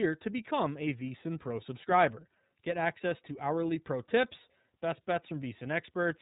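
Throughout the speech, the sound is muffled and boxy, with nothing above about 3.8 kHz, and vowels carry a rough, slightly synthetic grain. This is the iLBC codec: each frame's excitation is coded on its own, and the plainly audible roughness fits its 13.33 kbps mode with 30 ms frames.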